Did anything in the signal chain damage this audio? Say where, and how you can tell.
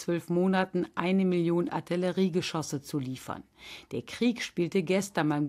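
No, nothing in the signal chain damaged this recording.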